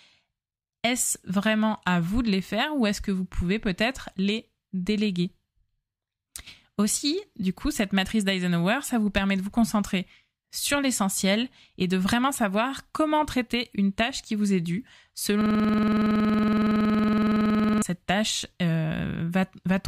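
Right after "qui vous est due", at 15.41 s, the speech locks into a system hang loop that runs until 17.82 s. The machine or its audio driver stalled while the sound hardware kept replaying the same ring buffer, so one 46 ms slice repeats exactly, some fifty times over. That loop length fits a 2048-sample buffer, and cycling at 21.5 Hz it comes across as a rough, rapid stutter, almost a coarse buzz.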